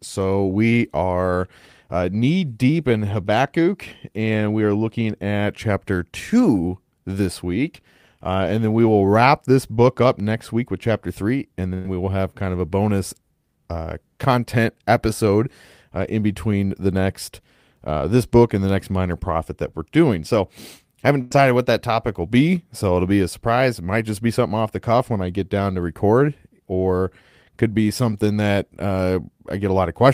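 Short concealed packet loss at 9.75 to 9.79 s: about 20 ms of the speech never arrived in time to be decoded, so the receiver patched the hole by extending the sound just before it, about 19 ms of substitute audio, and then blended back into the real signal. The result is a brief smear or wobble in the voice rather than a clean gap.

A burst of packet loss follows at 11.73 to 11.89 s, where about 100 ms went missing in a run. The receiver carried the preceding sound forward for about 108 ms, letting it fade as it went, without dropping to silence, and about 10 ms of audio was dropped as playback caught up. A second burst at 21.21 to 21.33 s follows, with about 100 ms missing and about 98 ms filled. Each sounds like a stretched, decaying tail before the speech resumes further along.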